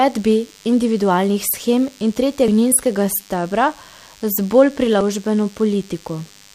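Throughout the speech runs a thin, steady DECT cordless phone buzz: radio bursts every 10 ms are rectified into a 100 Hz tone rich in harmonics, roughly 30 dB below the voice. Unlike mains hum, its pitch sits exactly on 100 Hz with a harsh, buzzy edge. At 2.48 s, and again from 5.01 to 5.04 s, damaged data in a compressed stream makes the decoder lose sync and resync, giving a brief squawk or blip.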